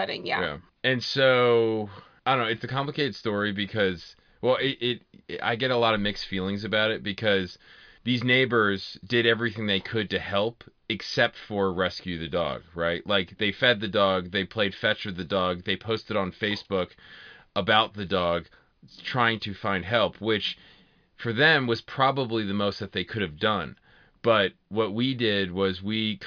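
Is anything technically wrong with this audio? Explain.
No, nothing technically wrong can be heard in this speech recording.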